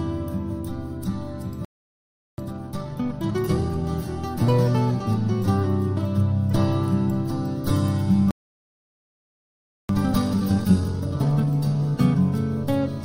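The player most likely ran short of data or had its output thread held up. At 1.65 s the sound cuts out in mid-flow and stays silent until 2.38 s, a gap of about 0.73 s. This is a playback stall. When output resumes, the player works off the backlog that built up during the gap by trimming small slices and cross-fading across the joins. From 2.38 to 3.84 s the audio therefore runs at 1.5 times normal speed while keeping its pitch. This is time-compressed catch-up.

The same sequence comes back later and is more severe. At 8.31 s a second stall, again likely caused by starved or blocked playback, silences the sound until 9.89 s, about 1.58 s. The longer gap leaves more to recover, so the catch-up from 9.89 to 11.47 s runs at 2 times speed. At that rate the material sounds clearly rushed but keeps its normal pitch.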